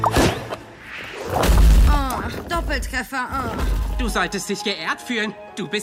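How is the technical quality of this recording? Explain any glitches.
There are no audible glitches anywhere in this recording. Nothing in it calls for an explanation.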